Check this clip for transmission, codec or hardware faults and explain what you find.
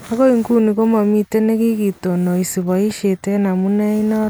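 Nothing in the speech signal points to a transmission, codec or hardware fault; it stays continuous and steady throughout, with no audible breaks, distortion or level disturbances.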